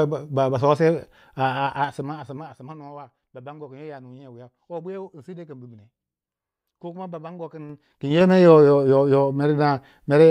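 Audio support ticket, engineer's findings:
Zipper noise, 1.58–2.88 s and 7.54–8.3 s. Ticking during gain ramps: level moves in 3 dB unsmoothed steps, around 20 dB down, then back up. Each step clicks.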